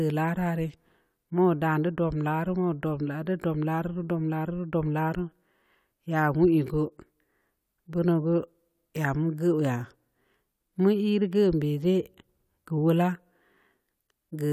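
No technical faults can be heard anywhere in the speech recording.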